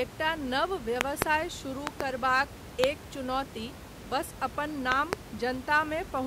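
Sharp, loud pops cut through the speech four times, standing far above the voice while it carries on underneath: a double pop from 1.01 to 1.24 s, another pair from 1.87 to 2.03 s, a single pop from 2.84 to 2.86 s, and a final pair from 4.92 to 5.15 s, just after "बस अपन". Each loud pop is likely a sudden voltage pulse, from a switch, static or a driver glitch, entering the signal path. The steady room noise sits about 15 dB below the speech.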